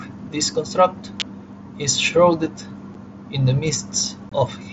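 A speech recording, carried over a wideband mSBC Bluetooth headset link. At 1.20 s, between "this construct" and "is shrouded", a sharp snap sits on top of the voice. It is likely an electrical switching spike from a nearby switch or discharge. Unconcealed Bluetooth headset packet loss cuts two abrupt holes. One is at 2.94 s, before "in the", about 7.5 ms long, which fits one lost packet. The other runs from 4.29 to 4.32 s, about 22.5 ms, which fits three lost packets.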